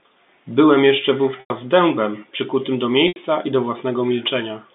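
Packet loss with pitch repetition: audio went missing at 1.40 to 1.50 s (100 ms) and 3.08 to 3.16 s (80 ms), and the receiver looped the last pitch period to fill each gap, so the telephone-band speech briefly holds on a buzzy, fading tone before resuming.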